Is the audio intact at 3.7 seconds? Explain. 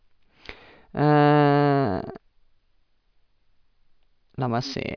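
Yes, the audio is intact at 3.7 seconds, with no fault audible at that moment.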